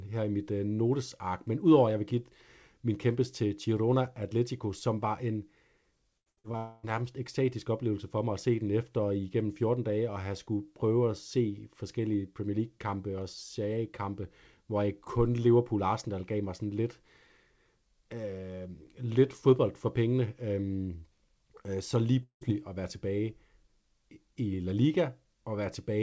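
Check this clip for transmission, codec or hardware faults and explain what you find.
Two transmission faults are present, on a call path band-limited to 8 kHz as G.722 would be.

Repeated packet loss (robotic sound), 6.18 to 6.55 s: four short gaps, the longest about 79 ms, each patched by extending the preceding audio, so over half this span is synthetic. The result is choppy audio with fragments missing.

Long network dropout, 6.57 to 6.85 s and 22.23 to 22.43 s: at 6.57 s about 260 ms is replaced by a stretched continuation of the last sound with no silence. At 22.23 s the continuation fades into roughly 110 ms of silence before audio resumes. Both likely reflect a network outage.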